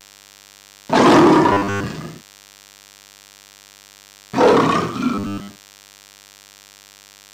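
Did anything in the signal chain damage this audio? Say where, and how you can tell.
Yes. The analogue wiring picks up DECT cordless phone buzz for the whole clip: a steady, thin 100 Hz buzz rich in harmonics, about 30 dB below the audio. A nearby DECT radio bursting every 10 ms is rectified in the analogue circuit, producing that tone.

At the driver or buffer stage there is robotic sound from repeated short buffers, from 1.53 to 1.87 s and from 5.15 to 6.44 s. The audio turns into a rigid, metallic 100 Hz buzz, likely because late buffers force a roughly 10 ms stretch to repeat in place of most of the real audio.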